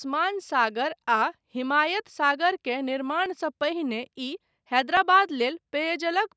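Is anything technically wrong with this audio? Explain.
Yes. At 3.26 s, between "हिमायत सागर के" and "पहिने ई", and again at 4.97 s, the speech jumps ahead, skipping about 10 ms. This is likely a dropped buffer (overrun): samples were overwritten before being read, so the surrounding audio joins directly.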